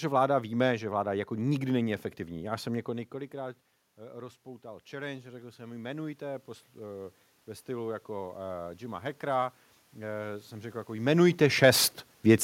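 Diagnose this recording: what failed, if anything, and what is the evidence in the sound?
Automatic gain rising in call processing: after input dropped about 17 dB, the AGC raised gain about 10 dB from 2.17 to 9.09 s, swelling voice and room noise alike.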